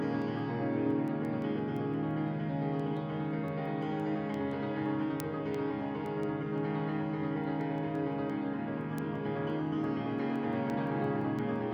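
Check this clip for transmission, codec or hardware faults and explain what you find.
One hardware fault is present. From 0.22 s to 11.73 s, ticks repeat roughly every 0.15 s. These are word clock ticks: an unlocked receiver clock, about 150 ppm off, slips one sample per tick.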